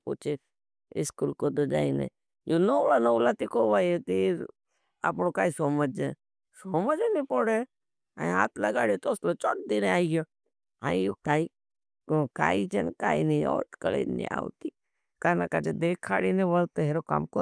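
No technical faults are audible anywhere in the speech recording.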